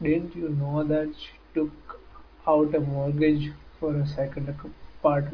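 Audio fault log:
Nothing stood out on listening to the speech in this clip.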